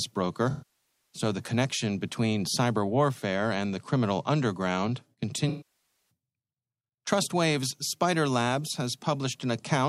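Speech with two dropouts that decay into near-silence and fade back: 0.50 to 1.22 s, just before "the connection between cyber", and 5.49 to 6.10 s, right after "and the criminal underground". Both fit AAC frame loss with concealment, where about 0.6 s of frames went missing and the decoder stretched the last good spectrum before fading it out.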